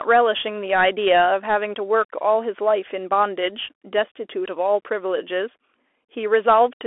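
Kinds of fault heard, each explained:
Bluetooth CVSD headset codec: one-bit slope coding at 64 kbps, so the speech sits in a 300 to 3400 Hz band with nothing above 3.8 kHz, with scratchy sibilants and granular hiss.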